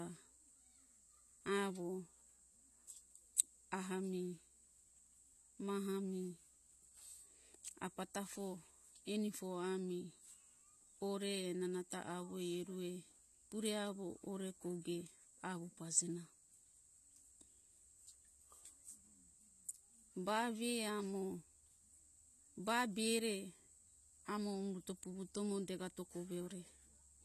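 From start to finish the speech carries AAC compression damage: nothing survives above 13.7 kHz, and sibilants turn fizzy and warbling, which points to a low bitrate of roughly 32 kbps and likely comes from AAC-LC coding. Unlike a plain low-pass filter, the swirling, smeared texture betrays quantised frequency frames.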